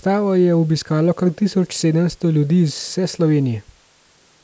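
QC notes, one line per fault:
No faults heard anywhere in this speech recording.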